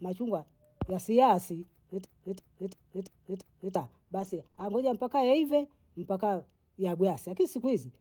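At 2.05 s, right after "machungwa yasiasi", the speech falls into a system hang loop. The system stalled. The audio hardware kept replaying the same stretch of its ring buffer. That stretch is 341 ms long, which fits a 16384-sample buffer. It repeats five times, about 2.9 times a second, until 3.76 s. The result is a slow, jerky machine-gun stutter of one identical fragment. Roughly a second and a half of real speech is lost.

From 4.19 to 4.65 s, just before "mpaka yaive mpaka", there is repeated packet loss, which gives a robotic sound. A few short gaps arrive one after another. The longest lasts 20 ms. Each gap is patched by stretching the previous sound forward. About 13% of the span is concealed this way. The speech turns choppy, with small pieces missing.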